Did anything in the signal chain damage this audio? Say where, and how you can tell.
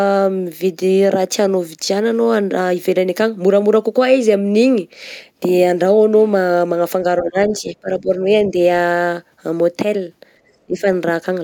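Yes. The call processing stage hurt this speech twice. From 7.23 to 8.1 s the voice dips, about half a second affected in total, at worst roughly 15 dB down. A shorter hit at 10.66 to 10.85 s goes deeper, about 20 dB. That loss is speech suppressed in double talk, likely from an echo canceller that couldn't tell the talker from loudspeaker echo while both ends spoke, so it pulled everything down.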